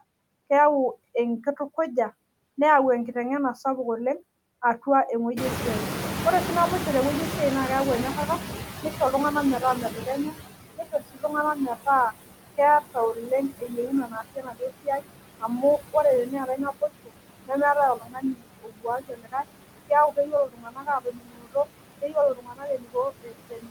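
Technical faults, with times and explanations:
Throughout, noise suppressor artifacts: background is pulled down by about 21 dB frame by frame. The noise sinks between the words and rises under them.
5.36 to 10.43 s, noise suppressor catching up: after "sapuk oleng' atua", the room noise jumps about 22 dB near 5.5 s. The suppressor's noise estimate lags, so noise comes through with less reduction at first, then sinks by about 18 dB over roughly 5 s.
8.82 to 11.87 s and 12.57 s to the end, speech cut by the noise suppressor: parts of the speech are treated as noise and dropped by up to about 20 dB, under a second in total in the first stretch. In the second stretch the drops reach about 22 dB. The affected parts sound swallowed or faint.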